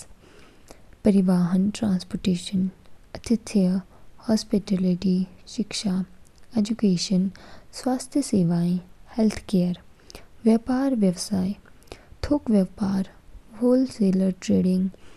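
Nothing in this recording stands out as a technical fault, so there's nothing to flag here.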